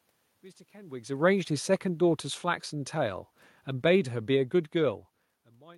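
From 1.37 to 5.25 s, automatic gain falling turns down the input by about 8 dB; speech and room noise sink together as the waveform tapers.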